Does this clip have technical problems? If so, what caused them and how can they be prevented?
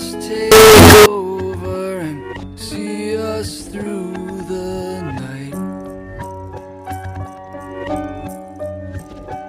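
Yes. From 0.52 to 1.06 s the audio turns into very loud, harsh distortion, and quiet moments blare as loudly as everything else. This is likely signed and unsigned mixed up: 16-bit samples read with the wrong sign convention flip their top bit, so every pass through zero jumps across the full range. Prevent it by declaring and checking the sample format (signed versus unsigned) at every conversion or hand-off between components.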